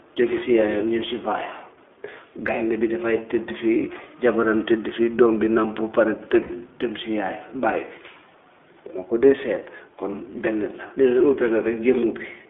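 Throughout, the speech passes through the iLBC codec, a narrowband VoIP coder that encodes the excitation of each frame on its own, in a way that fits 20 ms frames at the 15.2 kbps mode. The line keeps only about 300 Hz to 3.5 kHz, so the top end is gone and the low end is thin. The codec damage is plainly audible: the voice stays clear but sounds rough and somewhat synthetic.

From 6.42 to 6.52 s, lost iLBC frames leave a gap of about 80 ms, which fits four consecutive 20 ms frames dropped in transit. The decoder fills the hole by repeating the last pitch cycle blended with noise, fading it as the loss goes on. The result is a brief held, slightly buzzy, breathy vowel in place of the missing sound. Because each iLBC frame decodes independently, clean speech resumes almost immediately after the gap.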